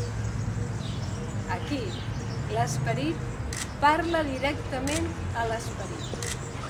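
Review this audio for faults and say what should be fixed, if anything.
Sample clock jitter runs throughout: an unsteady converter clock smears timing by a microsecond or so, adding hiss about 40 dB below the signal that swells on loud, bright passages. Prevent it with a clean, low-jitter master clock and proper clock distribution to the converter.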